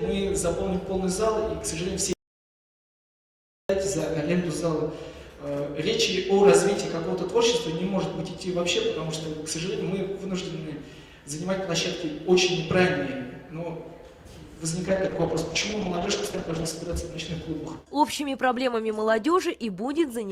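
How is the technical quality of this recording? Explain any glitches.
Two faults affect the recording: a full dropout early on and a stretch of degraded coding near the end.

From 2.13 s to 3.69 s there is an audio dropout to silence lasting about 1.57 s. The sound cuts off mid-flow and the gap is silent, with no room tone or noise floor. The likely cause is a lost input, such as a disconnected device, a failed link or an accidental mute, while the recorder kept writing silence. Whatever occurred in that interval is not recoverable.

From 14.9 s to 18.57 s a call bitrate drop degrades the sound. The encoder was given far fewer bits, so it quantises more coarsely and discards high-frequency content. The texture turns rough and watery and the top end goes dull, which suggests a fall from about 48 kbps to roughly 13 kbps. The worst quality holds for about 1.6 s before the bitrate recovers and clarity returns toward the end of the clip.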